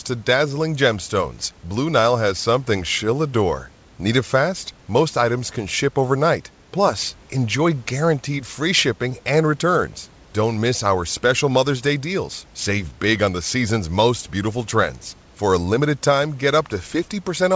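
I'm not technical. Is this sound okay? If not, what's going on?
Yes, nothing is wrong with this recording.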